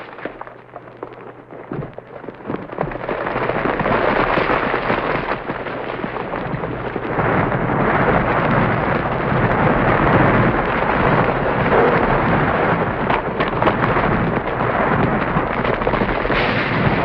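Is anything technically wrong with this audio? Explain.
Yes. From 10.87 to 12.83 s the sound turns coarse, watery and muffled as the highs disappear. This is a call bitrate drop: the bandwidth estimate fell, forcing the codec from what sounds like about 128 down to roughly 21 kbps for nearly 1.9 s.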